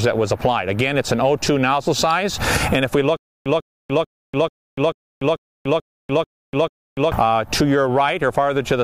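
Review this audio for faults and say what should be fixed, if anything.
At 2.11 s there's a single sharp snap sitting on top of the sound, an electrical switching spike, most likely a nearby switch, motor or static discharge arcing and getting picked up on the audio line. Keeping cables shielded and away from switching gear should prevent it.

From 3.17 to 7.12 s you get a stutter with silent gaps: a 149 ms burst repeats nine times, each followed by about 290 ms of dead digital silence, so it cycles every 439 ms. That pattern likely comes from a stalled player or stream replaying its last fragment on each retry, and whatever should have played there is gone. More buffering headroom or a steadier source connection should stop it happening.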